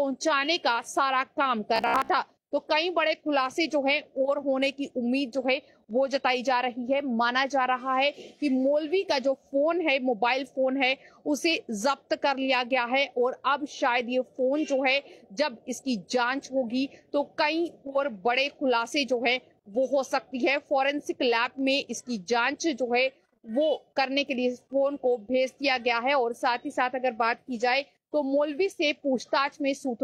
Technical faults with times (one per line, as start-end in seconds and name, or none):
1.76-2.11 robotic sound from repeated short buffers